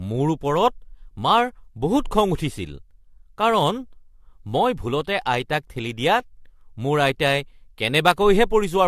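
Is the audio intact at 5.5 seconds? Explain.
No. Generation loss runs through the whole clip, 5.5 s included. It was likely re-encoded several times with AAC. The audio sounds swirly and hollow, with blurred attacks and nothing above 14.4 kHz.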